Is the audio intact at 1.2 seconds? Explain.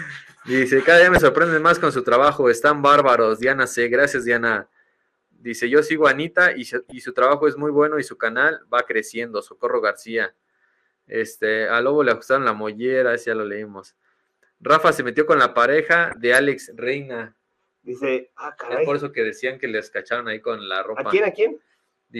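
No. DAB burbling runs from 1.09 to 1.21 s: bit errors slipping past error correction corrupt sub-band levels for a handful of frames, producing short blips of noise in single sub-bands. MP2 compression is also audible throughout, likely from a low rate around 80 kbps, leaving the sound dull and granular as upper bands drop out.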